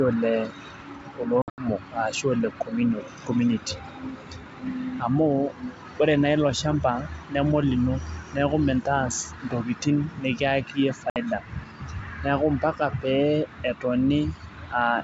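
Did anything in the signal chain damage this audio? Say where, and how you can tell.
Yes, there is packet loss on an ADPCM call, at the network stage. Silent holes fall at 1.42–1.69 s, with the longest run about 80 ms, and at 11.10–11.17 s. The decoder's predictor then restarts out of step, so the speech resumes slightly distorted before it settles.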